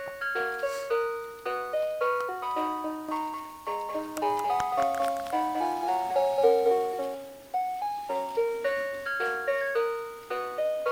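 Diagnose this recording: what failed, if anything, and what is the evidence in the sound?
Doubled audio track, 3.09 to 7.15 s: a dry, somewhat quieter copy trails about 200 ms behind, likely from a slower second capture path or an out-of-step edit.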